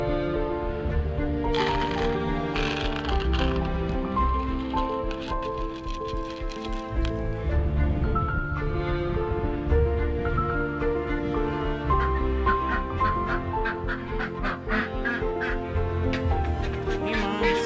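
Nothing technical stands out to the ear here; the audio just runs its course without anything that needs pointing out.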